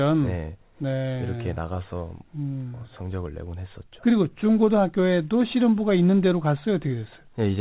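No technical faults are audible in the speech, which has come over a WebRTC call path with nothing above 4 kHz, a band limit that fits narrowband G.711 mu-law coding.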